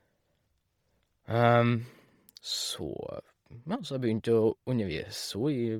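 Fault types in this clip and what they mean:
Bluetooth LC3 compression: the speech carries a breathy, grainy haze in its upper range for the whole clip, and the damage is heavy. Fine high-frequency detail has been swapped for noise-like fill. The likely cause is LC3, the Bluetooth LE Audio codec, at a low setting that fits 32 kbps with 10 ms frames. Unlike the warbling, metallic swirl of MP3 or AAC, the top end here turns into an even, hissy texture.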